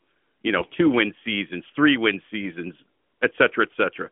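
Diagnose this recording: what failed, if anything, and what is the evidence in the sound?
Over a weak mobile link, AMR bit errors corrupted the speech for about 0.09 s, from 0.58 to 0.66 s, a span that fits roughly four damaged 20 ms frames. The less protected bits arrived flipped at around five percent while the checks on the core bits still passed, so the decoder used them. Misplaced excitation pulses and skewed fine pitch, gain and spectral values give a brief hoarse, scratchy gargle inside the narrowband AMR-NB sound.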